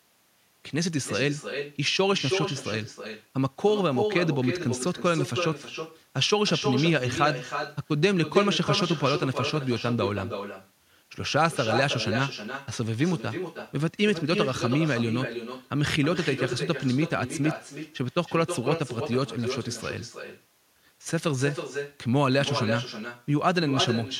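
Across the whole recording, no echo canceller is working on the far end: the speech is being played out of a loudspeaker there, picked up again by that end's microphone, and sent straight back. The result is echo with no canceller. Every phrase is trailed roughly a third of a second later by a second copy sitting about 7 dB below the original, thinner, so the speech sounds smeared and doubled throughout.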